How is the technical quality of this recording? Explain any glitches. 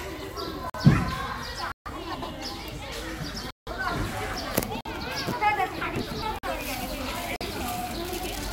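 The recording has two kinds of fault running through it: repeated dropouts to dead silence, and three spots where the audio gets briefly scrambled.

Block of digital silence: the sound cuts hard to zero at 0.70 s, 4.81 s, 6.39 s and 7.36 s, each about 46 ms long, which fits a 2048-sample buffer going unfilled. Longer holes sit at 1.72 to 1.86 s (about 139 ms) and 3.51 to 3.67 s (about 163 ms). The output wasn't filled in time, so zeros went out instead, with no fade. The short ones land as a pop, the long ones as an audible gap.

Frames out of order: at 2.14 to 2.31 s, 6.01 to 6.23 s and 8.09 to 8.26 s, two adjacent chunks of coded audio were decoded in swapped order. The halves are about 78 ms each in the first and last spots, which points to runs of three frames, and about 105 ms in the middle one, which suggests four. It comes across as a quick garbled flutter, but no time goes missing.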